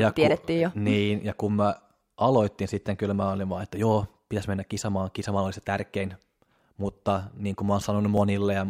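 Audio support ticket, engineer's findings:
Regular clicks/pops in the speech, about five, spaced 2.02 s apart from 0.12 s to 8.18 s. Evenly timed, so not content-related. Likely clock drift buffer slips between two devices on independent clocks. Rate mismatch of roughly 700 ppm fills or drains the intermediate buffer until a block of several dozen samples is dropped or repeated, and each slip is one click. Check clock sync or enable resampling at the device boundary.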